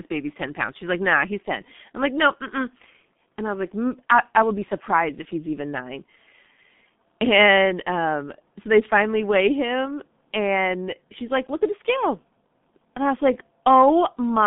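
From start to end the speech carries G.723.1 codec damage: nothing passes above 3.7 kHz, leaving a muffled 150 Hz to 3.6 kHz telephone band, and the heavy, hoarse coarseness with smeared consonants fits a roughly 6 kbit/s model updated only every 30 ms. Plain band-limiting would stay muffled but clean.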